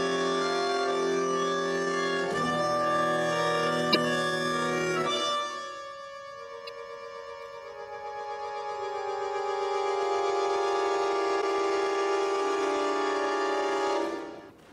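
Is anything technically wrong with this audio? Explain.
Yes, there's damaged data in a compressed stream at 3.91–3.97, 6.67–6.69, 11.38–11.43 and 14.46–14.52 s: corrupted frames throw the decoder off sync, briefly breaking up the sound.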